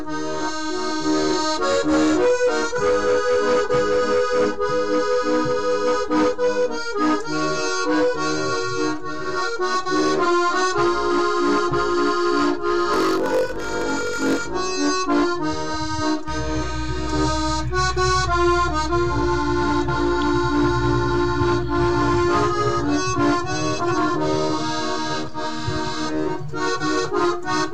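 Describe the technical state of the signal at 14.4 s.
At 14.4 s the signal is inside a block size mismatch (padded), running from 12.92 to 14.47 s. One stage hands over shorter blocks than the next reads, which fits 1024-sample reads. The missing tail of each block is filled with silence. Those tiny gaps repeat at 46.9 Hz and are heard as a low buzz. The sound also plays slower, at 0.938 times normal speed, with its timbre roughly unchanged.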